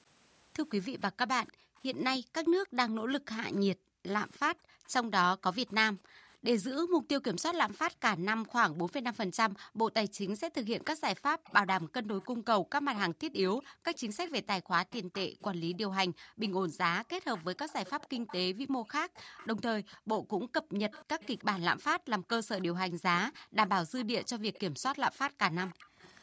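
From 0.84 to 1.49 s, a faint delayed copy of the speech trails the original by 305 ms at about 25 dB down. It returns from 4.34 to 5.74 s at about 30 dB down and runs from 11.16 to 26.12 s at about 20 dB down, where it is most audible. This is likely an echo leak: a loudspeaker on the far side played the call, and its echo canceller let part of what its microphone caught travel back down the line.

Alongside this, the canceller itself clamps the far microphone hard whenever its loudspeaker plays, which is background gated by the echo canceller. Between 1.14 and 10.55 s the room sound dips, by as much as about 40 dB, for about three seconds in total before recovering. Shorter dropouts follow between 12.39 and 16.4 s, about a second altogether, and between 18.19 and 26.01 s, about two seconds, so the background keeps vanishing and returning in short holes, within a band that stops at 8 kHz.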